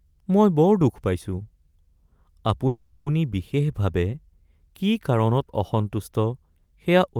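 Delayed packets likely drained the jitter buffer, so a call audio freeze from 2.67 to 3.08 s stretches the last sound into a fading fill before speech resumes intact.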